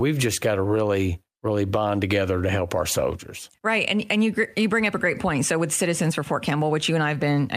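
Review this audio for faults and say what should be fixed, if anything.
Nothing needs fixing, as no technical faults can be heard anywhere in the speech recording.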